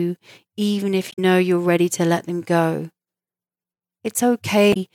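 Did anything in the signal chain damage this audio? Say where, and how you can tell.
Yes, at the codec stage, from damaged data in the compressed stream. On this speech there's a short glitch from about 1.09 to 1.19 s and another from 4.70 to 4.77 s. That's the decoder hitting corrupted bytes, misreading or dropping those frames, losing sync, then hunting for the next valid frame header before carrying on.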